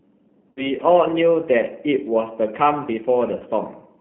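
Across the whole speech clip the sound is thin and slightly rough, with a faintly synthetic edge. The band runs from about 150 Hz to 3.4 kHz, so nothing bright comes through. This is the G.729 codec. At a rate that fits 8 kbit/s, it rebuilds each short frame from a vocal tract filter, a pitch predictor and a handful of pulses. That coarse model is what gives the sound its plainly audible roughness.

From 0.51 to 0.72 s the sound smears into a stretched, held sound that sags in level, then stays weak and distorted before recovering. This is VoIP packet loss concealed by the speech codec. About 60 ms of audio went missing, which fits two 30 ms packets. The decoder stretched its last pitch and filter with falling gain. Because each frame builds on the one before, the damage outlasts the gap itself. A shorter loss of about 30 ms, likely a single packet, does the same thing more briefly from 3.37 to 3.42 s.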